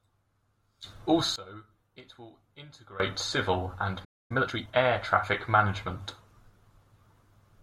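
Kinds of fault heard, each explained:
One channel inverted: Likely a polarity flip in one stereo channel; summed to mono, the centred speech drops about 20 dB into a remnant from 1.36 to 3.00 s.
Playback stall: Likely the player running out of data or being blocked; the speech cuts to silence for about 0.25 s, from 4.04 to 4.32 s.
Time-compressed catch-up: The player trims its backlog by splicing out small pieces, so from 4.32 to 4.82 s the speech runs 1.5 times fast at normal pitch.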